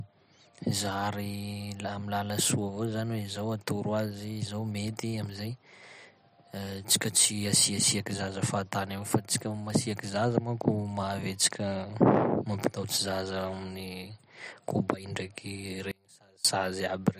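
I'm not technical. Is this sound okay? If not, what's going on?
No. Just after "amin'ny kobay ndraiky", from 15.91 to 16.45 s, the speech suddenly drops to a faint trace. That is an audio dropout to a faint residue, likely a brief signal break.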